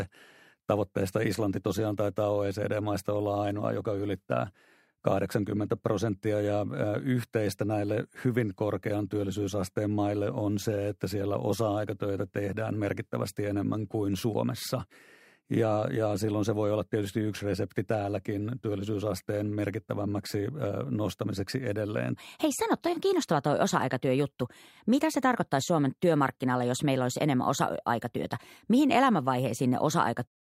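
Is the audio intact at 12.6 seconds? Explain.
Yes, at 12.6 seconds the speech plays through intact, with no dropout, click or other fault at that point.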